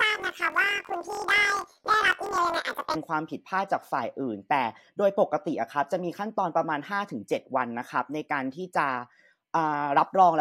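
It's a speech clip, and from 0.00 to 2.97 s it's hit by planar audio read as interleaved. Each block stores the left samples and then the right, but it's read as alternating pairs. So every 23.22 ms chunk, which fits a 1024-sample block, plays twice at double speed. The speech comes out an octave high with a flutter, with blocks cycling at 43.1 Hz.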